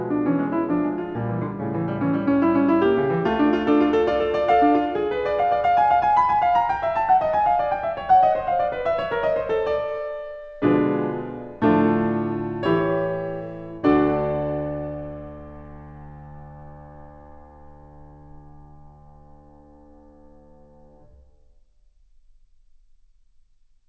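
Music, with no technical faults to be heard.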